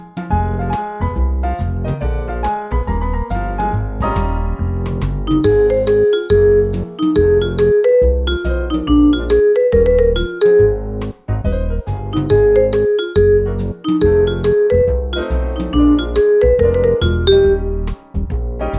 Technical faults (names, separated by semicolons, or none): none